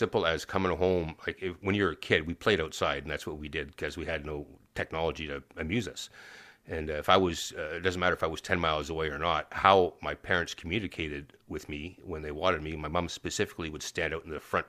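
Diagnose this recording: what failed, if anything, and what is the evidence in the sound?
Nothing failed at any stage of this speech recording.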